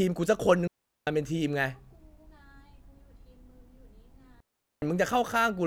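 Speech twice drops into a clean hole of near silence, at 0.67 to 1.07 s and 4.40 to 4.82 s, each about 0.4 s. These are digital wireless dropouts, where the receiver mutes after losing data.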